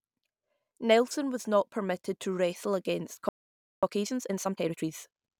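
At 3.29 s, just after "permitted to wrestle against", the speech halts in a playback stall lasting about 0.54 s, until 3.83 s. The player likely ran dry of buffered data or was blocked, so output dropped to silence: a flat waveform gap and an empty spectrogram column.

From 3.83 to 4.89 s a time-compressed catch-up follows, with the speech running at 1.5 times normal speed and unchanged pitch. Small pieces are cut and cross-faded to clear the backlog, giving a hurried sound; harmonics stay level while syllables crowd closer together.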